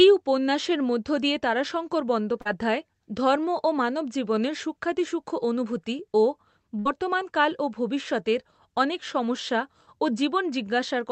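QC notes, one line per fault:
2.41–2.47 s, short concealed packet loss: right after "উপন্যাসের মধ্য দিয়ে তারাশঙ্কর" about 40 ms of the stream didn't reach the decoder in time. The receiver papered over the gap by extending the sound it last had, and you hear that as a quick smear before it blends back into the real signal. Over the call path's 8 kHz top end, the patch comes across as a brief wobble.
6.79–6.87 s, burst of packet loss: between "অনুভূতি ও" and "কাল ও ভবিষ্যতের অনেক" roughly 60 ms went missing in one run. The receiver kept the last sound going and turned it down as the gap went on, so there's a short held, fading stretch. Then the audio picks up further along, and whatever fell inside that gap is simply gone.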